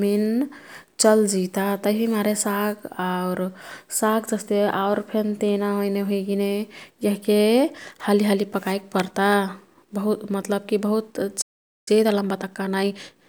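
At 11.41 s the speech cuts to silence for about 0.45 s, a playback stall likely caused by the player running dry. It resumes mid-flow rather than clicking through a brief dropout. From 11.88 s to 13.24 s, time-compressed catch-up hurries the speech at 1.25 times speed, but pitch stays normal, unlike a simple speed-up.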